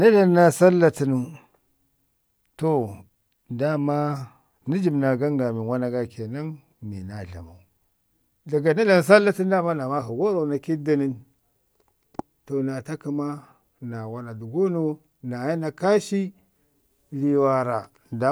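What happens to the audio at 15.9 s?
At 15.9 s the speech plays through intact, with no audible fault at that point.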